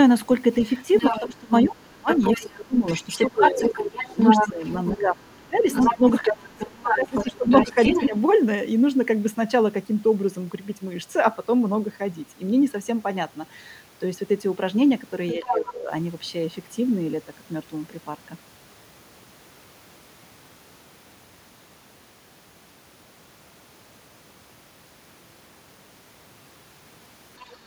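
From 0.63 to 8.08 s, the other side's voice leaks through at a level only slightly below the talker's. This is likely residual echo that the canceller failed to remove from the microphone, and on a spectrogram it appears as a second, overlapping set of harmonic striations.

From 1.2 to 8.15 s, speech is suppressed in double talk for about 4 s in total. The canceller likely mistook the talker for echo, so the waveform envelope collapses in chunks, dropping by up to around 25 dB, and the upper bands thin out.

Both faults recur briefly. The leak returns from 15.29 to 15.73 s, and the suppression from 15.34 to 15.9 s, with dips near 10 dB.

From 27.39 to 27.57 s, a faint scrap of the other side leaks in, roughly 30 dB down, and shows only as a weak trace on the spectrogram.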